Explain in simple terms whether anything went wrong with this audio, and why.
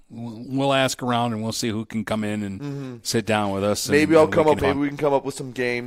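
At 4.59 to 4.62 s the speech is interrupted by a brief glitch lasting about 30 milliseconds. It comes from damaged data in a compressed stream. A small stretch of the compressed file was corrupted, so the decoder could not correctly rebuild that moment of sound. It lost its place before finding the next intact block of data and continuing normally.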